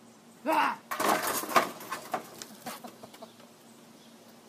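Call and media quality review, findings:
No audible faults found; nothing to raise.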